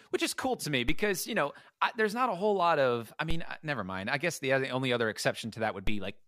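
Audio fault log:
0.89 s, 3.31 s and 5.87 s: DC step. Three times the waveform's zero line suddenly jumps by about -21 dBFS, right after "is cool to me" and then after "whole lot of i", with the last one near the end. Each jump lands as a short low thump or click while the speech carries on unchanged. The offset then sinks back toward zero over a fraction of a second, which fits a high-pass around 2 Hz draining it away.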